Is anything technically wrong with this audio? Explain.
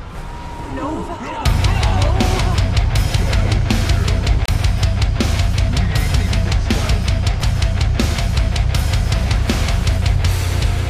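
Yes. There is damaged data in a compressed stream at three points: 4.46 to 4.50 s, 7.38 to 7.43 s, and a shorter one at 10.44 s. Corrupted bytes make the decoder misread or reject those frames, lose sync and hunt for the next valid frame header, which gives a brief chirp, squawk, click or gap. Unlike a playback dropout from an underrun, the glitch comes from the decoder misreading the file itself, so it would recur at the same places on every playback.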